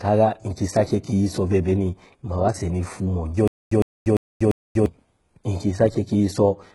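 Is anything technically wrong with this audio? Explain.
Yes, two things. Throughout, the treble sounds synthetic: s sounds come out gritty and lispy, and nothing's there above 11.5 kHz. That's likely HE-AAC compression at a very low bitrate, around 12 kbps, rebuilding the highs by copying lower bands upward.

From 3.48 to 4.86 s there's a stutter with silent gaps. A 108 ms burst repeats four times, every 346 ms, with about 237 ms of dead silence between. The stream probably stalled and replayed its last fragment, losing the audio in between.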